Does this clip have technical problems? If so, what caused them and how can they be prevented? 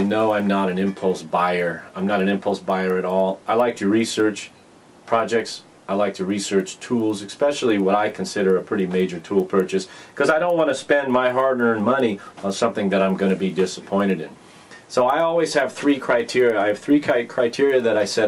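Yes. A resampler restarted on every block runs throughout. The 24 kHz to 48 kHz conversion handles each 100 ms block in isolation, missing neighbouring samples at block edges, so faint ticks repeat at 10 Hz whenever sound is present. Prevent it by keeping the resampler's filter state continuous across blocks.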